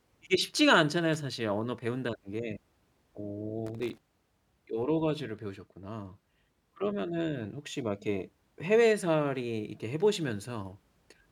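A worn or dirty contact in the cable path is making and breaking as it shifts, chopping the speech signal. This loose connector crackle appears as irregular scratchy bursts from 1.13 to 1.20 s and again, longer, from 3.66 to 3.98 s.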